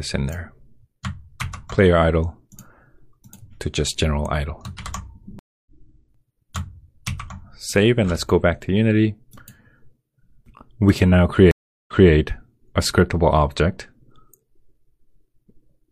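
At 5.39 s a stream reconnect drops the audio to silence for 271 ms, and it resumes about a third of a second further along. The link broke and a fresh decoder joined mid-stream. A waveform shows a flat gap, then a soft fade-in. At 11.51 s a second reconnect goes silent for 367 ms and resumes 232 ms earlier, so a short stretch repeats. The spectrogram shows an empty band, then a brief stretch heard twice.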